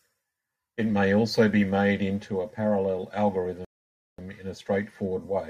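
At 3.65 s the player exhausted its downloaded audio, a rebuffering stall: after "made into a parallel" the speech drops to silence until 4.19 s, then resumes exactly where it stopped, adding about 0.54 s.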